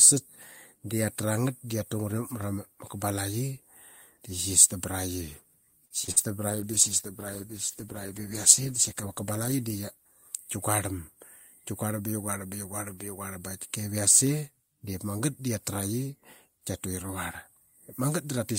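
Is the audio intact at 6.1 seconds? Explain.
No. From 6.04 to 6.09 s there is short concealed packet loss: about 40 ms never arrived, and the receiver extended the preceding sound, leaving a brief smear in the speech. Then from 6.11 to 6.18 s a burst of packet loss follows. Consecutive packets were lost or arrived too late, so the receiver held and faded the last sound into a buzz or hiss, and speech resumes with a piece missing.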